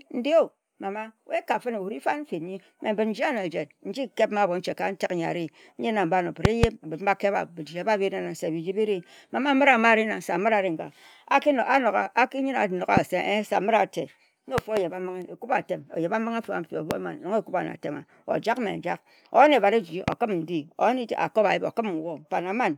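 Loud pops cut across the speech at 6.45–6.66 s (a double pop, the strongest at roughly 25 dB above the speech), 12.97–12.99 s (a single, milder one), 14.58–14.79 s (double), 16.91–16.93 s (single) and 20.08–20.15 s (double), the last three around 20 dB up. Each is likely a voltage spike from a plug, switch or static discharge. Unlike a dropout, the speech keeps running unbroken beneath each thump.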